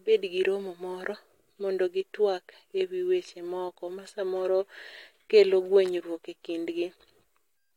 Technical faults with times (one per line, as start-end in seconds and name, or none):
none